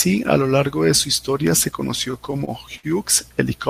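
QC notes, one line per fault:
2.11–2.86 s, repeated stalls (stutter): the audio stalls five times, with about 120 ms of fill in total and the longest hold lasting 60 ms. Late packets drained the jitter buffer, so the receiver stretched the preceding sound to bridge each wait. Nothing is lost, but delivery drags and stutters.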